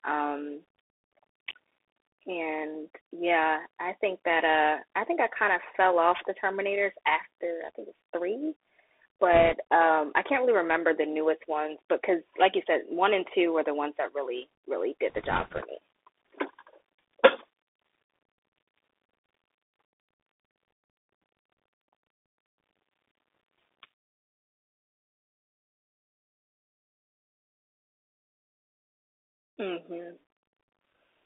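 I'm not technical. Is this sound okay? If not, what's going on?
No. A Bluetooth CVSD headset codec runs throughout: this phone-headset coding keeps only a narrow band, so the speech sounds muffled, s sounds turn scratchy, and a grainy hiss sits underneath.

Bit errors on a Bluetooth voice link occur at 9.33–9.53 s and 15.10–15.62 s. A small share of the transmitted bits got flipped, adding a brief rushing crackle rather than loud clicks.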